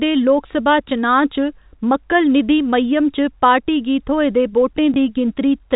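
At 4.94 s, just after "पार्टी गी थ्होए दे", packet loss with last packet repeated: one 20 ms gap refilled with the previous packet. This causes a small blip, with a duplicated waveform segment.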